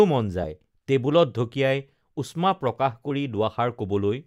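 At 0.43 s and again at 3.09 s the speech breaks into a brief chirp, squawk, click or short hole, a sign of damaged data in a compressed stream: corrupted bytes make the decoder misread frames and lose sync. Each blip shows as a jagged waveform discontinuity.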